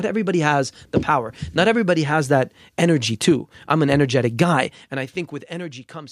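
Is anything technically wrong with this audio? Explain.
No, nothing technically wrong can be heard here.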